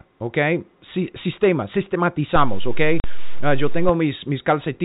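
At 2.36 s a DC step shifts the waveform's zero line to a new offset, as happens when a converter recalibrates or an offset input is switched in. It holds until 3.89 s, where the level returns; each transition produces a low thump while the speech continues unaffected.

Within that span, packet loss filled with silence cuts a 40 ms hole from 3.00 to 3.04 s, which fits two consecutive 20 ms packets going missing. The receiver inserted silence, so the gap has abrupt edges, and the speech stops hard through the narrow telephone band of the G.711 coding.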